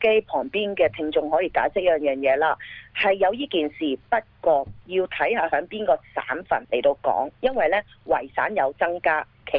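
No technical faults can be heard anywhere in the recording, and the signal holds steady throughout.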